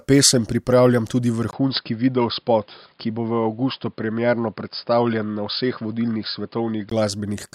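Input switched to a poorer device, from 1.51 s to 6.92 s: just after "pesem pripravljam tudi", the speech drops out for about 20 ms and returns dull and boxy, with nothing above 5.1 kHz. This is likely a change of capture device mid-recording, to a narrower-band microphone or headset profile, and it brings its own faint background noise roughly 45 dB under the speech. The loudness barely changes. The full brightness comes back at 6.92 s.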